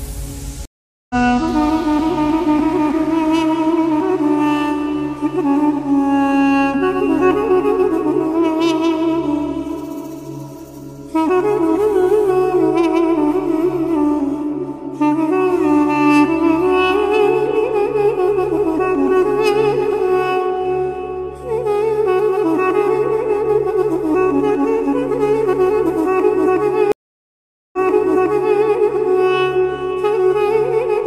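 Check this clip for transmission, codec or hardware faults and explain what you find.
Two stream reconnects break the clip. At 0.65–1.15 s the audio drops out for 444 ms and resumes about 0.4 s further on, so a short stretch is skipped. At 26.92–28.61 s it falls silent for 812 ms, then restarts 0.88 s earlier and repeats material already heard. Each time the link broke, playback stopped, and a fresh decoder joined mid-stream. On a waveform this shows as a flat gap followed by a muted or fading first frame. A spectrogram shows a blank vertical band, then content that fails to line up with what came before.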